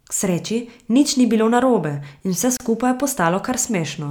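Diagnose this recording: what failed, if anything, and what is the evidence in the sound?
A gap at a join of encoded pieces, at the codec stage, opens in the speech from 2.57 to 2.60 s, a gap of about 31 ms with smeared edges. Separately encoded segments were joined untrimmed, keeping encoder delay and padding. Unlike a network dropout, nothing is lost: the speech resumes exactly where it stopped.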